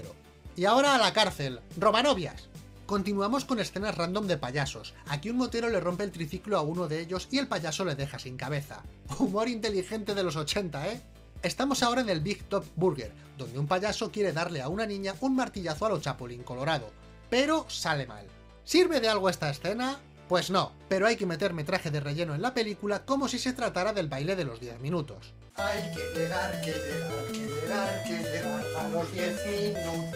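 Nothing is technically wrong with it.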